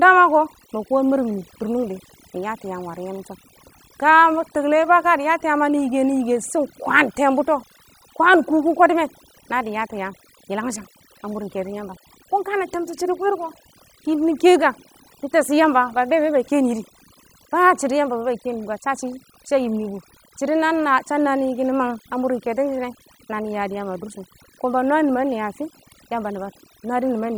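Throughout the speech, overdone noise removal leaves near-silent gaps with twinkling specks, while too-aggressive band suppression strips quiet vocal detail.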